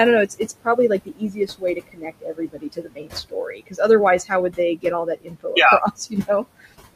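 Noise suppressor artifacts run through the whole recording. The suppressor pulls the room noise, which sits about 13 dB below the speech, down by about 21 dB in the gaps. It then lets the noise back under the voice.

Speech cut by the noise suppressor first appears from 0.26 to 3.13 s. About one and a half seconds of it is treated as noise and dropped by up to about 22 dB. It returns from 3.29 to 3.8 s and from 5.05 to 5.46 s, with dips of about 21 dB. Soft sounds there come out faint and swallowed.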